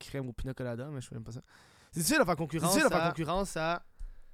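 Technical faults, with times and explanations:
2.58 s to end: doubled audio track. A second, roughly equally loud copy of the speech enters abruptly, about 0.7 s behind, likely from a slower capture path.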